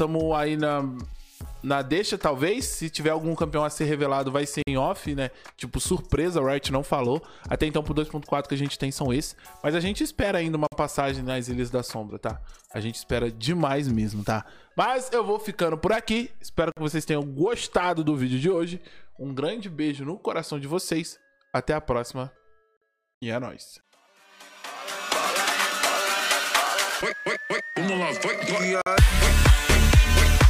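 At 4.62, 10.67, 16.72, 22.77 and 28.82 s the sound drops out for about 48 ms, a gap between chunks repeating every 6 s. The audio was joined from 6-second blocks, and silence was inserted at each join rather than carried through, so nothing is missing but the flow is broken. Each one is heard as a brief, hard-edged hole. A waveform shows a flat line with abrupt edges, and a spectrogram shows a narrow, fully blank vertical stripe across all frequencies.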